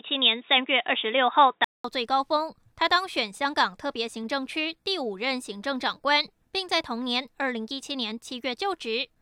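Input switched to a poorer device, 0 to 1.84 s: the speech is likely coming through a lesser microphone, with nothing above 3.8 kHz, a dull, boxy tone and faint added background noise. A 200 ms silence marks the switch, after which the sound opens up and the level shifts by a few decibels.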